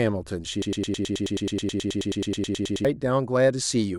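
From 0.62 to 2.85 s a broken-record loop replays a 107 ms speech fragment 21 times, exact and gapless unlike decaying echo, likely a stalled stream.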